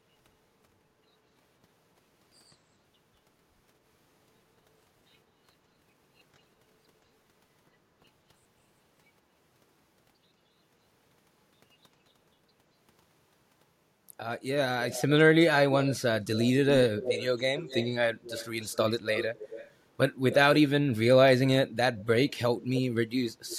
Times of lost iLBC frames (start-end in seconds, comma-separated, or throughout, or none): none